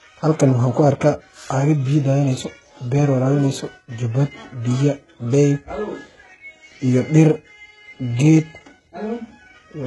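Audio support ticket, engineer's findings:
Speech, whole clip: treble present up to a hard ceiling near 11.5 kHz, but gritty and metallic, s sounds lispy. Likely cause: HE-AAC compression, heavy damage, consistent with a very low bitrate around 12 kbps. Spectral band replication copies lower bands upward under a coarse envelope, so harmonics misalign above the crossover. Unlike a plain low-pass or bandwidth-limited codec, the top end isn't dull or missing. It is bright but synthetic.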